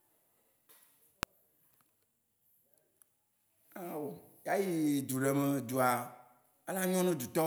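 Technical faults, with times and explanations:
1.23 s, electrical switching spike: a single sharp snap, peaking around -10 dBFS, sits on top of the speech for about a millisecond. It is likely a brief arc from a nearby switch, motor or static discharge, picked up by the audio line as an abrupt transient.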